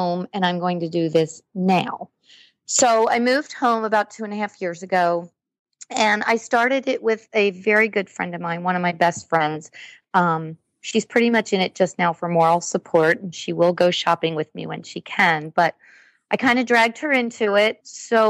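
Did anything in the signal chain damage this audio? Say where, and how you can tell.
No, nothing in the chain from capture to playback leaves an audible mark on this audio.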